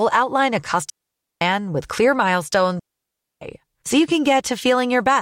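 Digital wireless dropouts hit this speech twice, from 0.90 to 1.41 s, just before "with clear", and from 2.79 to 3.42 s, just before "so you". Each time the radio link lost too much data for the receiver to reconstruct, so it muted instead. The mutes last about 0.52 s and 0.62 s, entered and left with a very brief fade. They sound like clean gaps of near silence, with no crackle or noise burst at either edge.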